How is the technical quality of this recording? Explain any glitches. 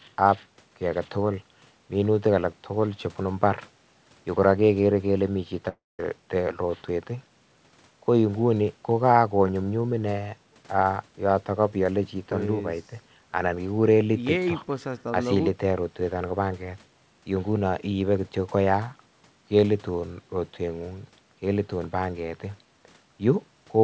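One glitch stands out, in audio that stops at 8 kHz, which fits a wideband G.722 call path. From 5.69 to 6.00 s, the sound breaks off. A likely long network dropout lost about 0.3 s. The receiver stretches the last sound into a fading buzz, then near silence, and the speech resumes without the missing part.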